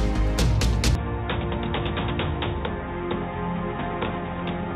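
From 0.95 s the sound abruptly turns duller, quieter and boxier, with nothing above 3.8 kHz and faint new background noise. No gap occurs. Shifting band, level and noise together point to a likely input switched to a poorer device.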